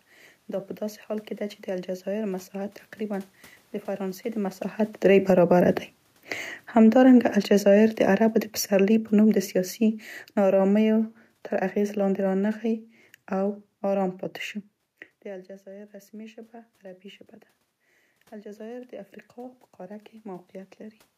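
From 4.9 to 14.2 s, automatic gain falling pulls the level down by about 14 dB; unlike the talker moving around 4.5 s, the room noise sinks with the speech.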